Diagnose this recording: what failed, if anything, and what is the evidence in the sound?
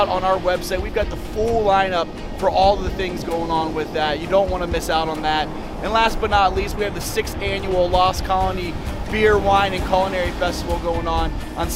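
Nothing here points to a failure anywhere along the chain, so there's really nothing to diagnose.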